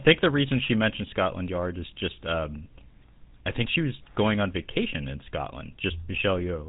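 From start to finish the speech carries GSM full-rate codec damage, plainly audible. The codec rebuilds the voice from a vocal-tract model driven by sparse, evenly spaced pulses. That gives a buzzy, gravelly roughness. Nothing passes above 3.8 kHz. The sound fits a 13 kbps stream.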